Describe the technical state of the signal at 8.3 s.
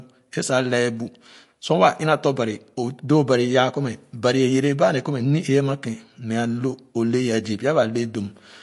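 At 8.3 s the speech carries MP3 compression damage, present across the whole clip. Nothing sounds above 11.3 kHz. Weak frequency lines flicker between frames, giving a watery, swirly texture and smeared onsets. This likely comes from a starved encoder, fitting roughly 48 kbps.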